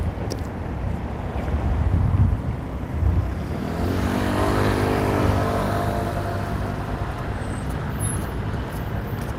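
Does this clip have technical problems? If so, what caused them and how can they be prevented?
No, this clip has no technical problems, so there is nothing to prevent.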